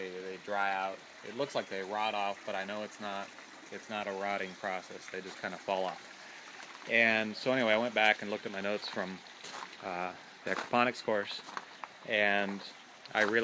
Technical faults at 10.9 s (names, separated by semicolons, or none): none